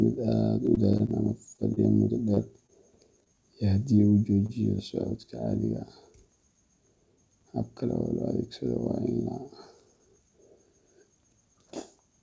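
From 0.66 to 3.35 s the speech carries scattered short gaps: about ten lost or late packets, each patched by extending the preceding sound, with the longest hole near 30 ms. Roughly 7 percent of the stretch is concealed, heard as brief ticks, smears and hiccups.

At 4.46 to 4.51 s there is a short stall from a late packet. The jitter buffer ran dry, so the receiver held the last sound for 28 ms until the packet arrived and then resumed. Nothing is lost, but that moment drags with a slight buzz or dip.

Between 9.84 and 10.39 s a jitter buffer speed-up trims excess queued audio by cutting pitch-period-sized slices in quick succession, roughly 50 ms in total. Playback runs at about 108 percent speed at unchanged pitch, so the phrasing sounds slightly rushed. Throughout, the G.722 call path leaves no content above 8 kHz, consistent with a 64 kbps setting.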